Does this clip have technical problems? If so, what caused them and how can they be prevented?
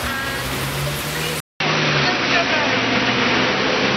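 Yes. From 1.4 s to the end, after a 200 ms gap, the sound turns duller, with nothing above 5.9 kHz, a level shift of a few decibels and faint new background noise. This likely comes from the input switched to a poorer device. Locking the recording input to one chosen microphone prevents it.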